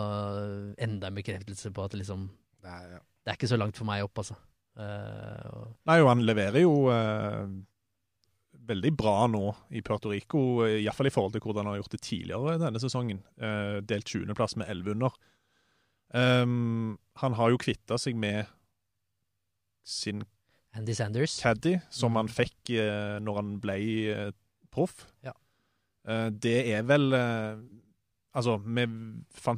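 No technical faults can be heard anywhere in the recording.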